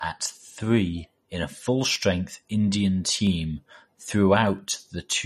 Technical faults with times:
0.00-5.26 MP3 compression
0.64-4.59 clock drift buffer slips

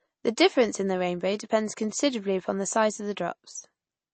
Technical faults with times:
0.00-4.14 MP3 compression

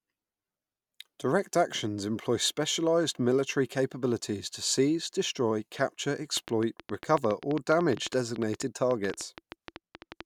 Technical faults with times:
6.37-10.22 train of clicks

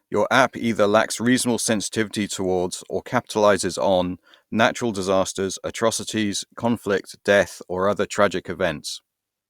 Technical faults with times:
none

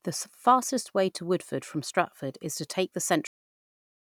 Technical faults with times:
3.27-4.13 cut-off end

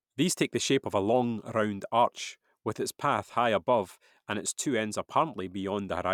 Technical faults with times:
none

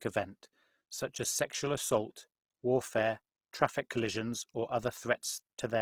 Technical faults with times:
0.00-5.82 Opus compression

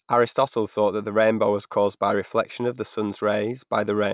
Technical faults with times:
none

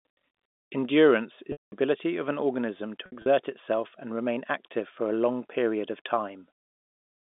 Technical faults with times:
1.52-1.72 packet loss with pitch repetition
3.06-3.26 packet loss with pitch repetition

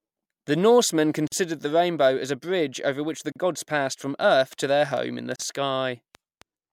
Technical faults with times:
1.27-1.32 gap at a join of encoded pieces
3.32-3.36 gap at a join of encoded pieces
4.31-6.43 train of clicks
5.36-5.39 gap at a join of encoded pieces

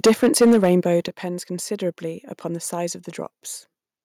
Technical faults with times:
0.04-0.75 microphone overload
0.07 microphone volume stepped down
1.08 microphone volume stepped down

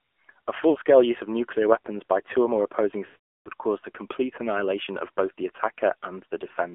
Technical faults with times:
0.00-6.74 AMR narrowband mobile codec
0.70-0.78 lost AMR speech frames
3.06-3.49 lost AMR speech frames

